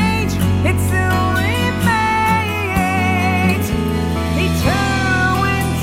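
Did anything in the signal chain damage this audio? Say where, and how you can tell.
No, nothing in the signal chain damaged this audio.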